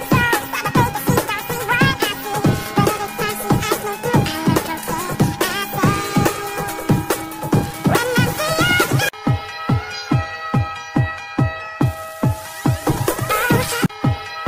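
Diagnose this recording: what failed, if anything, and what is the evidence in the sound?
No technical faults detected.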